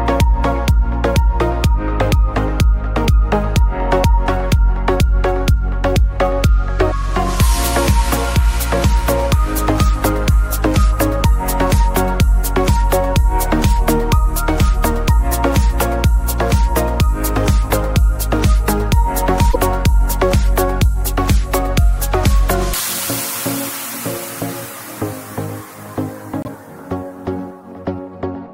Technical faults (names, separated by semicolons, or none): broken MP3 bit reservoir